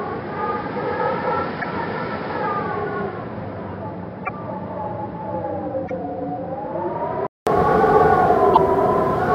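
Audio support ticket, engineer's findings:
Dull, band-limited sound from 0.0 s to 7.47 s: nothing above 5.3 kHz, level about 5 dB lower, a new noise floor roughly 40 dB under the signal. About 200 ms of silence at 7.47 s, then full bandwidth returns. Likely cause: input switched to a poorer device, whose narrower band, own tone, lower level and own noise carry the first 7.47 s until the input switches back.

Four short breaks, each 0.04 s long: 1.61 to 1.65 s, 4.25 to 4.29 s, 5.87 to 5.91 s, 8.53 to 8.57 s. The sound jumps ahead at each. Likely cause: broken MP3 bit reservoir. Dropped frames leave the following frame borrowing reservoir bytes that now belong to another frame, so those first frames decode wrong. Timing fits 26.1 ms frames.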